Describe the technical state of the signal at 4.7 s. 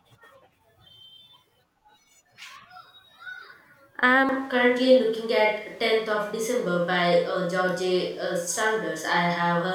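A switch to a distant microphone governs 4.7 s, starting abruptly at 4.29 s and lasting to the end. The close microphone likely dropped out, leaving a farther pickup. Speech turns roomy, hollow and bass-light at a similar level, with room noise about 30 dB below it.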